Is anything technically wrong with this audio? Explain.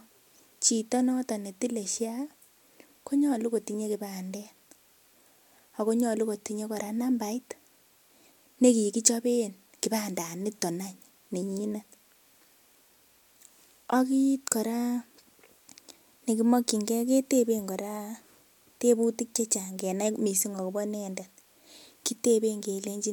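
No, nothing technically wrong can be heard here.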